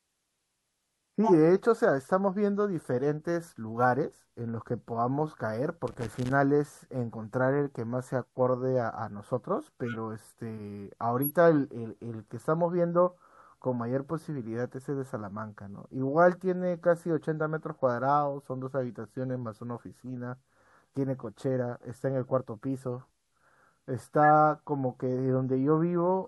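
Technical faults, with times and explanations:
1.23–1.33 s, 9.86–9.96 s, 11.22–11.31 s and 24.23–24.28 s: corrupt frame decoded. Each is a short chirp or blip lasting roughly one or two codec frames (the first three sound about two frames long, the last about one). The decoder played damaged frames as if they were valid, so misread gains and codes put energy at the wrong frequencies. The worst, near 1.2 s, peaks around -10 dBFS. The others are quieter, near -20 to -25 dBFS. On a spectrogram each appears as a narrow vertical block of misplaced energy with hard edges at the frame boundaries.
5.88–6.31 s: loose connector crackle. For a little under half a second, an irregular scratchy crackle sits over the sound. It comes from a worn or dirty contact rapidly making and breaking, which chops the signal on and off, with pops where any DC offset on the line jumps. The waveform shows jagged dropouts and spikes at uneven spacing. 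The spectrogram shows scattered broadband vertical streaks across the whole band.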